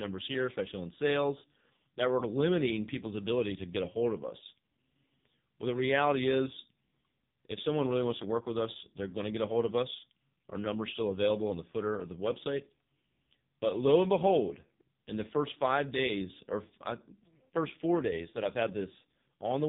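From start to finish the speech carries heavy AMR narrowband mobile codec damage. Nothing above 3.8 kHz survives, so sibilants and consonant edges are gone. The voice turns buzzy and synthetic as the vocal-tract model runs short of pulses, which fits a very low bitrate near 5 kbps.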